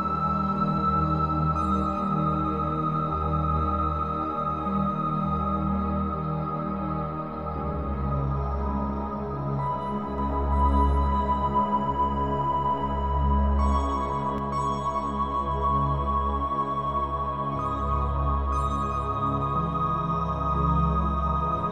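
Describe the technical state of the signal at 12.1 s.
At 12.1 s the signal carries a doubled audio track from 10.18 to 14.38 s, likely from a second, slower capture path feeding the mix. A full-band copy at about equal level trails by roughly 150 ms, dry and uncoloured, switching on and off abruptly.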